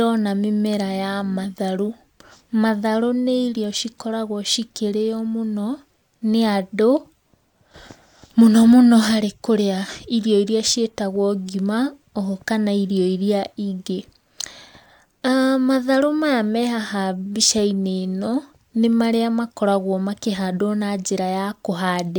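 No audible technical faults.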